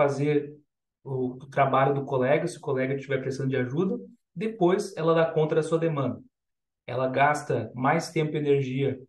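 No technical faults can be heard anywhere in this recording.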